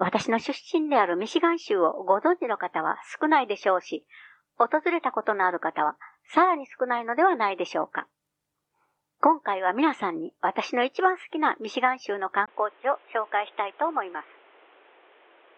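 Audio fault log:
12.46 to 15.57 s, input switched to a poorer device: a gap of about 20 ms opens at 12.46 s. After it, the sound runs to the end of the clip band-limited, with nothing above 3.8 kHz, so it turns dull and boxy. The level drops by roughly 5 dB. A new background noise sits about 30 dB under the signal. Together these likely mean the recording moved to a narrower-band microphone or a headset's call profile.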